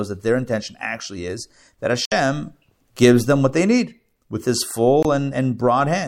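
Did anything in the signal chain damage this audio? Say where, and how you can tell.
Yes. At the wireless playback link, the sound cuts to silence at 2.05–2.12 s, just after "intention actually is that", for about 64 ms, and again at 5.03–5.05 s for about 21 ms. This is likely a Bluetooth dropout, with three packets and then one lost. Unlike a codec mute, the audio resumes as if it had kept playing.

At the clock-matching buffer stage, from 3.88 to 4.40 s, after "gives them what they", the audio slows by 5.8% and drops about a semitone (103 cents), then snaps back. This is likely a drift correction step. Speed and pitch move together, so it is not a pitch-only shift.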